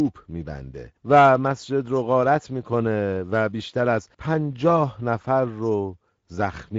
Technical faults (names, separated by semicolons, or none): Speex codec